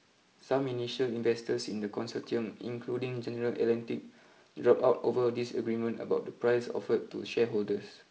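No technical faults are present in this speech clip, which comes through G.722 wideband telephone coding at 48 kbit/s.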